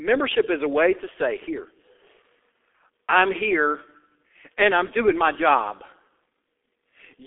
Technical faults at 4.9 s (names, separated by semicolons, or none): G.723.1 codec